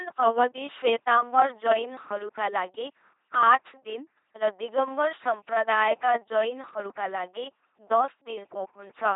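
LPC-10 vocoder damage runs through the whole speech clip. Each short frame is rebuilt from a ten-pole vocal tract filter excited by either a buzzing pulse train or noise, so every moment is forced to be fully voiced or fully unvoiced. The result is a heavily degraded, mechanical robot voice, with buzz and hiss appearing where that voicing choice goes wrong. Nothing is heard above 3.8 kHz, which fits a 2.4 kbit/s LPC-10 stream.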